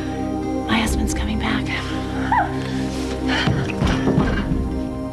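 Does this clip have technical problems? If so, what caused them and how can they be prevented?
No, this clip has no technical problems, so there is nothing to prevent.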